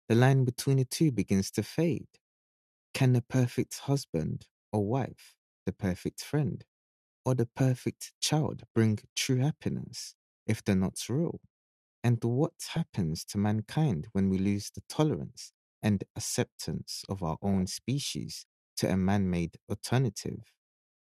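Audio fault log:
8.59–8.76 s, 12.66–13.18 s, 17.45–17.71 s and 20.40–20.43 s, DAB burbling. Short bursts of burbling sit over the programme. The longest is about half a second, near 12.7 s. The last is a brief blip. Weak reception lets bit errors slip past error correction into the MP2 audio data. The damage points to an error rate well under one percent. Corrupted samples put short blips of noise in single sub-bands, and corrupted scale factors make sub-bands leap in level for up to a frame, producing the gurgle.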